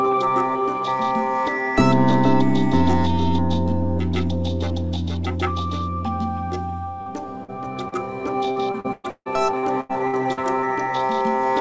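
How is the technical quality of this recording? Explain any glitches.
The recording has clear network trouble in its second half: a few isolated dropouts, then a longer stretch that turns choppy. It came through a call codec, and the top end stops around 8 kHz, which fits G.722 running at about 64 kbps.

First, three short concealed packet losses at 7.02–7.08 s, 7.44–7.50 s and 7.88–7.94 s. Each time roughly 40 ms of audio didn't arrive in time, so the receiver bridged the hole by extending whatever it had just played, pitched if tonal, noise-like if not, then crossfaded back. You hear a quick smear or wobble at each spot, and anything very brief in those gaps can simply vanish.

Then from 8.52 to 10.39 s it's repeated packet loss with that robotic sound. There are 11 separate gaps in under two seconds, the longest about 158 ms, and around a third of the stretch is patched rather than real. 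Because the concealment keeps restarting before the audio recovers, the filled-in bits stack up into a choppy texture with chunks of the sound missing outright.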